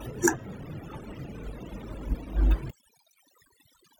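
Throughout, the pauses drop to near silence flecked with faint twinkling specks. This is overdone noise removal: the reduction was set too strong, switching off individual frequency bands near its noise estimate and taking quiet parts of the voice with them.

From 0.39 to 0.46 s there is a brief smeared, phasey patch. This is AAC frame loss with concealment. About 43 ms of audio went missing, which fits a single lost frame, and the decoder filled the gap by reusing the last good spectrum.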